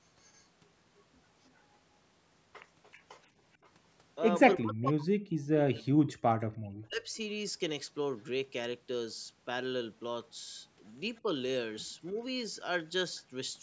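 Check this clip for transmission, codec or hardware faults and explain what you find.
Two call-processing faults are present in this speech: a faint echo leaking back, and the talker's own speech being pushed down during double talk.

Echo leak at 0.23 to 0.43 s, 1.46 to 1.50 s, 2.92 to 3.03 s and 11.16 to 11.20 s. The far end's echo canceller likely left some loudspeaker pickup in its microphone signal. Each scrap is a very faint copy of the speech, arriving 315 ms late and sitting far below the direct speech.

Speech suppressed in double talk at 3.61 to 3.66 s, 4.56 to 7.18 s and 11.23 to 11.29 s. With both sides talking at once, the echo canceller likely confused the talker with echo and attenuated both. The short events are shallow dips. The long one takes chunks out over about two seconds, with drops near 40 dB.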